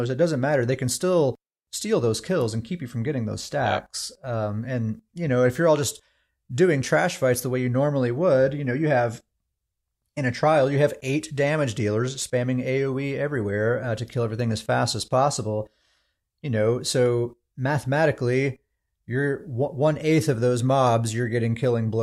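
Nothing stood out on listening to this speech recording.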